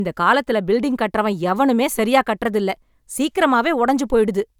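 No technical faults are audible.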